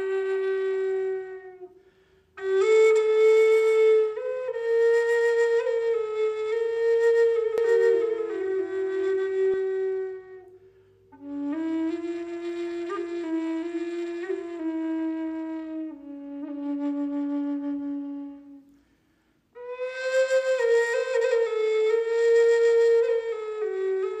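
From 7.58 s to 9.54 s the sound is heard twice: a doubled audio track, with a second full-band copy trailing the original by roughly 0.7 s at about the same level. The copy carries no reverberant tail or room colouring, and it cuts in and out abruptly at the edges of that span. The likely cause is the signal being picked up a second time through a slower route, or an edit leaving two misaligned copies in the mix.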